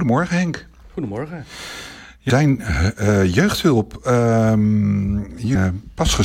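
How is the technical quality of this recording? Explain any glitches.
The recording has two short glitches, at 2.30 s and 5.55 s, both from damaged data in a compressed stream: corrupted frames throw the decoder out of sync, producing a brief chirp, squawk, click or short hole while it resynchronises.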